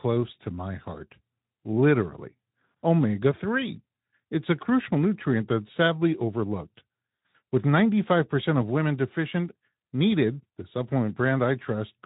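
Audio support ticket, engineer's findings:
No faults found in this clip.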